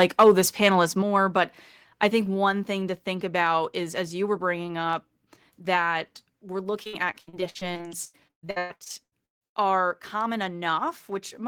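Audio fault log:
0.00–0.31 s, microphone overload: The opening peaks hit a hard ceiling, running about 4 dB past the converter's limit, with a few percent of samples flattened. Their tops are sliced off, so the loudest syllables take on a harsh, crackling edge. This is most likely an input level set too high, so the converter ran out of headroom and could only square off the waveform.
1.02 s, microphone volume stepped down: Voice and background fall together by about 5 dB in one abrupt step. The drop comes just after the distorted opening, so the likely cause is the call software sensing an overloaded microphone and cutting the device's input volume in a single move rather than easing it down.
6.83–9.65 s, repeated packet loss (robotic sound): Right after "bringing up that we're", the audio turns choppy and robotic. Some 25 short holes occur in under three seconds, the longest about 150 ms. 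About 40% of this stretch is patched by stretching the preceding sound forward, and the next hole follows before the stream recovers. That repeated smeared filling gives the robotic texture, and the gaps leave pieces of the speech missing.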